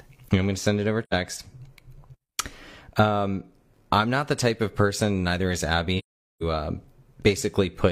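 At 1.03–1.14 s, after "to send it over", and 5.98–6.43 s, after "of person neither is", AAC frame loss with muting leaves soft-edged, silent holes. The decoder zeroed the missing frames' spectrum, so the overlapping windows fade the sound out and back in.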